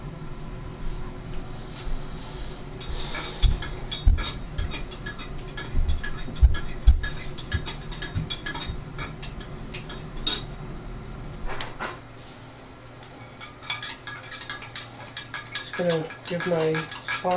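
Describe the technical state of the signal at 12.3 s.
At 12.3 s the signal is intact, with no dropout, distortion, glitch or other technical fault to be heard.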